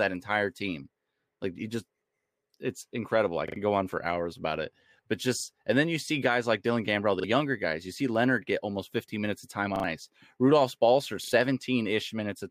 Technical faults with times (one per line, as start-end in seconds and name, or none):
3.48-3.56 repeated buffer
5.40-5.44 repeated buffer
7.20-7.24 repeated buffer
9.76-9.84 repeated buffer
11.24-11.32 repeated buffer